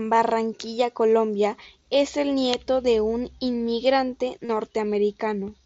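At 4.45 s, just after "nieto de un inmigrante", concealed Bluetooth headset packet loss fills a roughly 40 ms gap with a repeated wideband waveform, giving a brief buzzy tone before the sound resumes.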